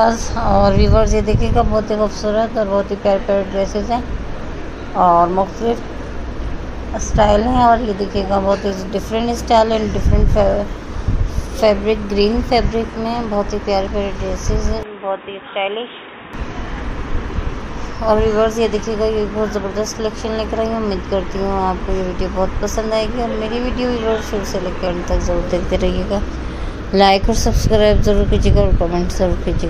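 From 14.83 s to 16.33 s the sound turns narrow and dull, with nothing above 3.8 kHz, drops about 10 dB, and gains a faint new noise floor, with no gap at the change. This is likely an input switched to a poorer device.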